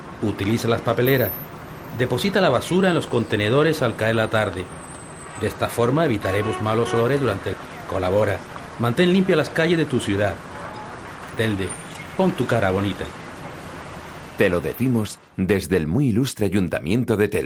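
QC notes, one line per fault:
8.15–8.70 s: jitter buffer speed-up. The receiver drained excess buffered audio by repeatedly cutting out short pitch-period pieces, about 50 ms in total, so the sound runs at 107% speed with pitch unchanged and feels hurried. The spectrogram shows unchanged harmonic spacing but time-compressed events.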